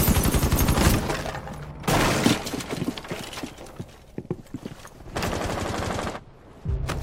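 No technical faults can be heard anywhere in the recording, and the signal stays steady and intact throughout.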